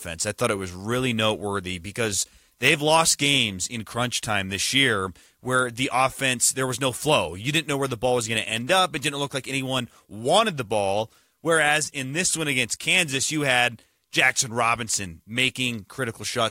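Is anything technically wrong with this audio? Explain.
No, nothing in this speech recording stood out as technically wrong on listening.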